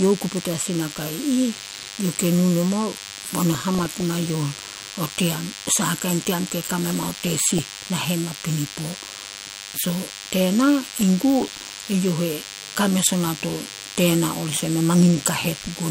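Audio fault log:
throughout DECT cordless phone buzz. A thin, steady buzz sits under the speech, roughly 15 dB below it. It repeats at 100 Hz and carries many harmonics. A nearby DECT transmitter fires a radio burst every 10 ms, and the audio circuit rectifies each one.
1.52–1.88 s, 3.51–4.32 s, 6.83–7.59 s (ending just before "nahen napinipo"), 10.95–11.89 s, 15.58–15.70 s DAB burbling. Noise blips ride over the speech. Weak reception lets a small bit error rate, under one percent, slip past error correction. Corrupted samples put short noise blips in single sub-bands, and corrupted scale factors make sub-bands jump in level for up to a frame.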